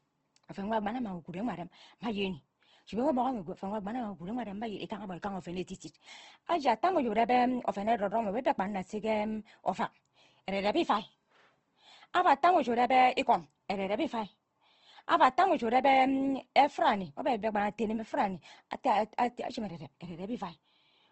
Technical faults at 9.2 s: Opus compression

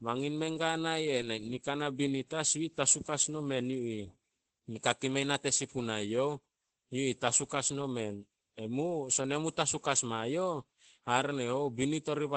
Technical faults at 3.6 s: Opus voice compression

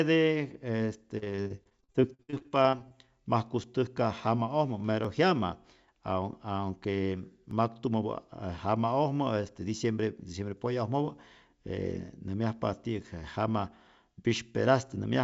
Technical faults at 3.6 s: dropped buffer (overrun)

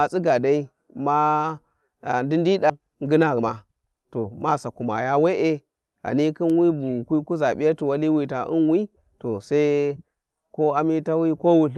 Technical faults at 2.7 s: skip ahead; jitter buffer speed-up

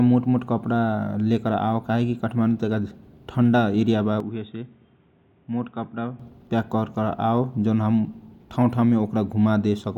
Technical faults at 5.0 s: input switched to a poorer device

